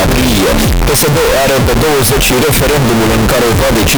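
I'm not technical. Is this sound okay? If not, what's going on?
No. From start to finish the sound is extremely loud, harsh and buzzy, with background hiss as loud as the main sound. This is likely a float read as integer fault: audio stored as 32-bit float was played back as 32-bit integer, flattening the waveform into near-square blocks.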